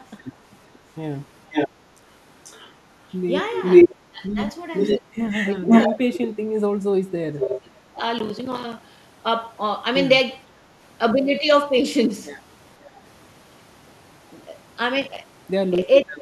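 A far-end echo canceller likely left its loudspeaker pickup in place, causing an echo leak from 0.26 to 6.27 s. A copy of the speech returns about 495 ms late and louder than the original. Briefer, quieter leaks recur at 7.43 to 7.61 s (512 ms) and 12.86 to 13.93 s (535 ms, faint).

The canceller likely confused both talkers, producing speech suppressed in double talk. There is a dip of about 10 dB at 0.31 to 0.36 s, and the speech drops by as much as 25 dB across 4.09 to 8.01 s and again from 16.03 s to the end.

Processor overload crackle from missed deadlines on buffers of about 5 ms leaves dozens of silent gaps, heard as gritty crackle at 8.19 to 9.08 s and 15.02 to 15.82 s.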